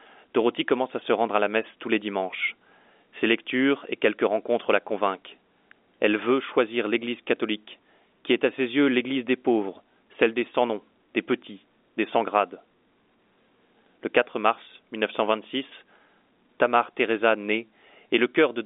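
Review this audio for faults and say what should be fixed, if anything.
Nothing here needs fixing: the speech sits in a 250 Hz to 3.6 kHz telephone band, consistent with G.711 A-law coding at 64 kbps.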